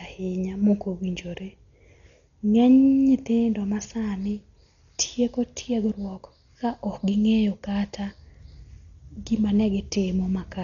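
Speech, dull throughout, with nothing above 6.9 kHz and rough, fluttering noise around tones. Heavy Dolby Digital compression is the likely cause, fitting a starved 40 kbps stream.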